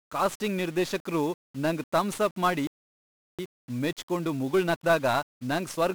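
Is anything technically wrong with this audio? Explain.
Yes, there are three problems. Throughout the speech you get 1-bit DFPWM compression, and it's heavy. Each sample is just one bit nudging an adaptive level up or down, so strong broadband quantisation noise rides on everything. The speech sounds fuzzy and crackly, with the treble lost under hiss, which fits a rate around 48 kbps.

At 2.67 s, right after "ನಿರ್ದೇಶಕ್ರು ನಂಗ್ ಥಮ್ಸಪ್ ಮಾಡಿ", there's a playback stall. The audio cuts out mid-flow and stays silent for about 0.72 s, until 3.39 s. The likely cause is the player running short of data or its thread getting blocked, after which output picks back up.

From 3.39 s to the end there's time-compressed catch-up. The player trims its backlog by dropping small chunks and cross-fading over the joins, running about 1.1 times normal speed. The speech sounds rushed but keeps its pitch.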